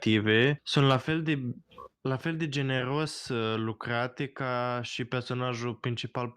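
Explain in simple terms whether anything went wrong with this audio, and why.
Yes, three things went wrong in this speech clip.

From 0.90 to 0.95 s there is microphone overload: the loudest moment of speech has a harsh, crackly edge. The likely cause is that the microphone's input level was set too high, so the tops of the loudest sound waves pushed past what the recording circuit could handle and were sliced flat. Only a small fraction of the sound in that burst was cut off, but that is enough to hear as distortion.

Right after that, at 1.02 s, the microphone volume is stepped down. The speech and the background both get quieter at once, in a single step rather than a gradual fade. This likely happened because the call software noticed the distorted peak a moment earlier and turned the microphone's input level down to stop it happening again.

From 2.77 to 2.81 s there is a short concealed packet loss. 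A sliver of audio, about 20 ms long, never arrived in time. The receiving end papered over the gap by stretching out the sound it had just played, then blended back into the real audio. It comes across as a brief smear or tiny wobble in the speech.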